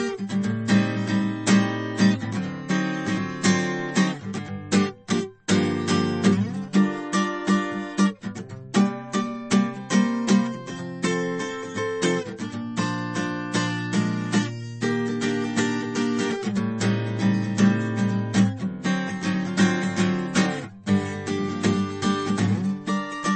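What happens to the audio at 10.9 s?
At 10.9 s the music sounds dull and plainly damaged, with nothing above 8.4 kHz, as it does throughout the clip. The likely cause is MP3 compression at a low bitrate, around 32 kbps, where the starved encoder cuts the treble and drops weaker frequency lines.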